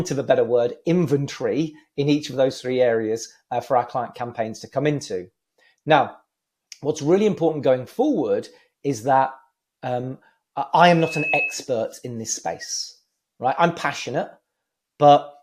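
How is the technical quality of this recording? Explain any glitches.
Two faults, both just past the ten-second mark, mar the recording.

From 10.01 to 10.06 s there is a short stall from a late packet. A packet did not arrive in time, the jitter buffer drained, and the receiver held the last bit of sound for 16 ms until the data caught up, then resumed from the same point. Nothing is lost; the sound is briefly drawn out, with a faint buzzy or dipped quality, and everything after lands about 16 ms later.

From 10.89 to 11.65 s a loudspeaker feedback squeal appears. A microphone was picking up a loudspeaker carrying its own signal, and at 2.6 kHz the loop gain rose above unity, so that frequency fed on itself. It is heard as a single high tone that swells over roughly half a second until it is about as loud as the rest of the audio, then stops at 11.65 s.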